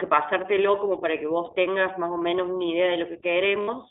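Speech carried over the iLBC codec: the sound is confined to a telephone band of roughly 300 Hz to 3.6 kHz, and the codec damage is plainly audible as a rough, slightly synthetic texture. That roughness fits iLBC's 15.2 kbps mode with 20 ms frames. Each frame's excitation is coded on its own, so the grain sits evenly on the voice rather than smearing from one moment into the next, which sets it apart from codecs that carry state between frames. Lost iLBC frames interrupt the voice twice, a 20 ms gap from 1.46 to 1.49 s and a 60 ms gap from 3.62 to 3.70 s. In each, the decoder fills the hole by repeating the last pitch cycle blended with noise, so a short buzzy, breathy held vowel replaces the real sound, and the longer gap fades as it goes. Unlike a dropout or a stutter, there is no silence and no repeated syllable, and the voice is correct again immediately afterward because the next frame does not depend on the lost ones.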